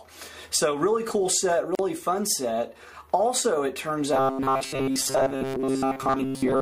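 At 1.75 s, a gap at a join of encoded pieces opens. The sound drops out for 39 ms, until 1.79 s. Two separately encoded pieces meet there, with encoder delay and end padding left untrimmed. The edges are smeared, and the sound resumes where it stopped.

From 4.13 s to the end, the sound turns robotic, a rigid metallic buzz at 134 Hz. This is likely from repeated short buffers. Each repeat lasts about 7.5 ms, and most of the real audio is replaced by these repeats.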